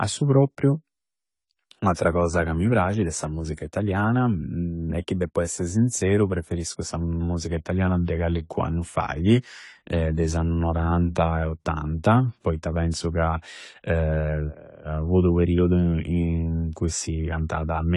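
Throughout the speech, nothing above about 11.4 kHz remains, and sibilants carry a fizzy, warbling smear, most likely from AAC compression at a low bitrate, which fits roughly 32 kbps. Unlike a simple low-pass filter, the surviving band itself sounds patchy and swirly.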